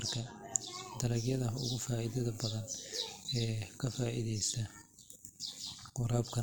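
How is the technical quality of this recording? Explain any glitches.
Technical quality is poor. Overlap-add ripple runs through the whole clip. The speech was split into windowed frames and rejoined with uneven overlap. Level pulses about 6 dB, around 100 times a second, giving a metallic buzz with extra tones around each note.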